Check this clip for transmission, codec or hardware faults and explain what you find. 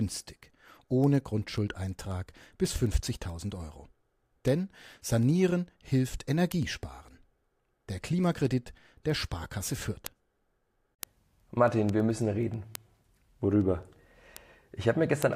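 There's one fault: word clock ticks run through the speech from 0.18 to 15.33 s, sharp clicks about ten a second, from a receiver's unlocked clock drifting roughly 200 ppm and slipping samples.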